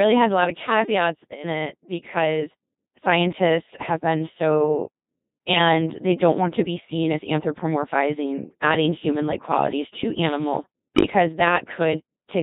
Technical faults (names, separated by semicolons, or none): Codec 2 vocoder; bit errors on digital voice radio